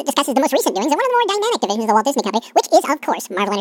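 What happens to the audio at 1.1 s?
At 1.1 s the speech is affected by audio read two samples at a time (double speed). This is not a local event. It runs through the whole clip. The reader treats each pair of samples as one frame, as if the data held two channels or wider samples. So the speech plays at twice its speed. Pitch rises by 12 semitones, a full octave. The result sounds hurried and chipmunk-like.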